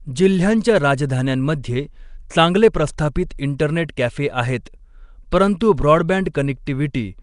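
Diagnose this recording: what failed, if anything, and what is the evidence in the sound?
Throughout the speech there is a rough, hissy halo and a smeared, underwater quality, with nothing above about 10.6 kHz. At the codec stage this is likely Nellymoser compression, its coarse fixed bit allocation noise-filling starved bands, fitting a rate near 44 kbps.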